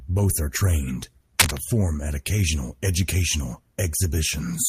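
A speech recording with one burst of cable scratch noise from 1.39 s to 1.59 s, between "are trained" and "at occasional educational". For about 0.2 s, a dense, irregular crackle and rustle sits on top of the speech, roughly 5 dB louder than the voice itself. The likely cause is a worn cable, connector or control being moved, with its contact resistance fluctuating rapidly and injecting that uneven noise straight into the signal path.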